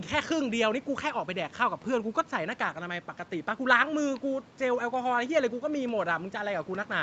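The speech carries the ordinary marks of a call chain, with the lowest bass trimmed by the microphone processing and nothing above about 8 kHz, consistent with a wideband Opus stream at a moderate bitrate of around 64 kbps, and nothing in it points to a technical fault.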